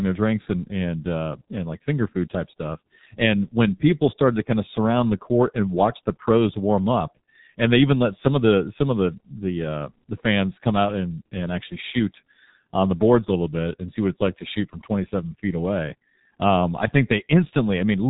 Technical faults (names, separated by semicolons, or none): G.723.1 codec